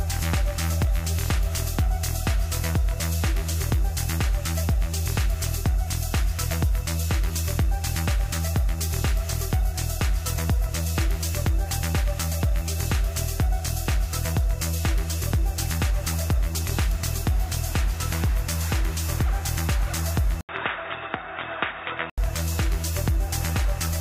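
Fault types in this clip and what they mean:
input switched to a poorer device: likely a device change, since an 80 ms silence precedes sound capped at 3.8 kHz and about 5 dB quieter, unlike plain filtering.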